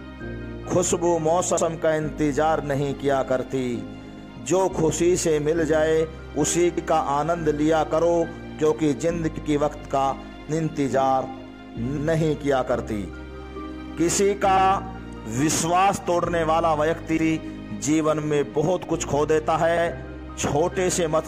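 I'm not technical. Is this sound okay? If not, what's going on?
No. The sound has overlapping chunks. It was handled in blocks of 2.5 seconds, and each block starts 100 ms before the last one ends. That bit plays twice, causing a stutter at 1.57, 6.77, 9.37, 11.97 and 19.77 seconds.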